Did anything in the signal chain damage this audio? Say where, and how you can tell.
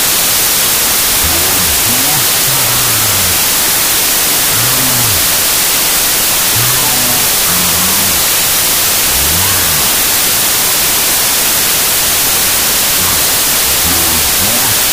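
Yes. Throughout, the speech is buried in loud noise, running at half speed and an octave low. It is a wrong sample width at sample-format conversion: 32-bit integer data read as 16-bit, so each sample becomes two, one holding the signal's top bits, the other noise.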